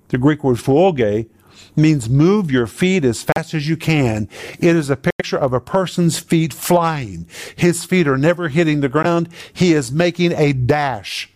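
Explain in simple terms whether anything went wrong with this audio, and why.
The speech drops out three times: at 3.32 to 3.38 s, the sound goes silent for about 40 ms; at 5.10 to 5.22 s, for about 90 ms; and at 9.03 to 9.06 s, for about 15 ms. Each time the sound picks up again where it stopped or slightly later. This pattern points to a Bluetooth stall, likely caused by radio interference delaying audio packets. The headphones used up their small reserve of sound and had to wait for the missing data to be resent.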